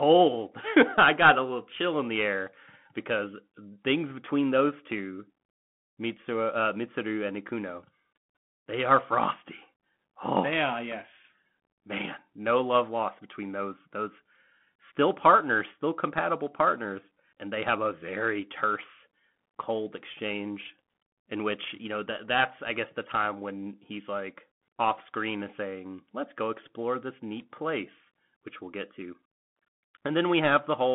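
Bluetooth CVSD headset codec damage runs through the whole speech recording. Nothing passes above 3.8 kHz, sibilants turn scratchy, and a granular hiss sits underneath, audibly coarse, from one-bit delta coding.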